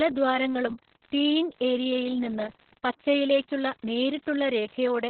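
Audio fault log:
Throughout: Opus voice compression, heavy. Nothing survives above 4.2 kHz, so the speech sounds muffled and telephone-narrow. The linear-prediction coder's coarsely coded excitation adds hoarseness and a slightly robotic edge. This points to narrowband SILK at roughly 6 kbps.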